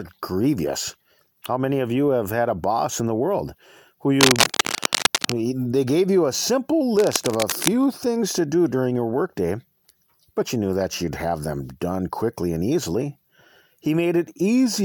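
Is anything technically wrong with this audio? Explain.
Yes, there is cable scratch noise in two bursts: from 4.21 to 5.36 s, about as loud as the speech, and from 6.97 to 7.69 s, somewhat quieter. The likely cause is a worn cable or connector being moved, its contact resistance jumping erratically. It sounds like scratchy rustling over the speech. A spectrogram shows dense, ragged broadband smears across those spans, and the waveform shows irregular spiky bursts on top of the speech.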